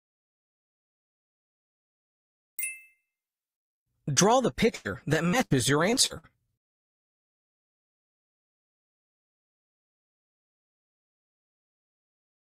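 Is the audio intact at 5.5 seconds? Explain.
No. A burst of packet loss runs from 5.45 to 5.52 s. The last sound is stretched and faded for 56 ms, and about 60 ms of audio is skipped.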